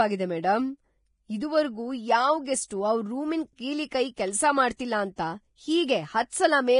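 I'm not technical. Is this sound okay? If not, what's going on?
No. The speech is hissy and grainy, with nothing above about 10.6 kHz. This heavy damage is likely Vorbis compression at a low quality setting. Pre-echo puts brief hiss just before sharp sounds at 0.42 s, 2.68–2.71 s, 4.77–4.79 s and 5.16–5.18 s, which softens their onsets.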